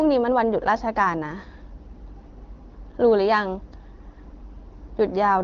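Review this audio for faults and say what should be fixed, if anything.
No faults found; nothing needs fixing.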